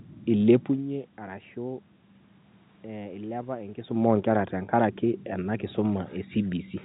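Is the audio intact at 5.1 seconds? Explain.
Yes, the audio is intact at 5.1 seconds, with no fault there.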